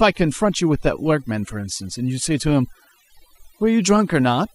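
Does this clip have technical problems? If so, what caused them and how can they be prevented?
Yes: overdone noise removal, running the whole way through this speech. The denoiser was pushed too hard, so it's shutting off frequency bands near its noise estimate and taking quiet bits of the voice with them. The result is a twinkly, lowered background. Next time, ease off the reduction amount and let a little noise stay.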